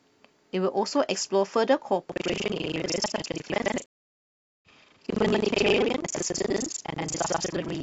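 Buffer tearing begins at 2.08 s and continues to the end of the sound. The process filling the ring buffer and the hardware draining it have drifted until they cross inside each period. About half of every buffer still holds audio from the previous lap, roughly a tenth of a second old, with a hard splice on either side. The result is a steady robotic buzz at 25 Hz, which points to a period of about 40 ms, and it rides on the speech wherever speech is present.

A stream reconnect follows at 3.86 s and lasts until 4.68 s. The connection dropped, and the player fell silent for 0.77 s before reconnecting and starting a new decoder partway into the stream. When the speech returns, it picks up at a point roughly a second later than where it broke off, so that stretch of speech is simply missing. The first frame after the gap fades in rather than coming in at full level.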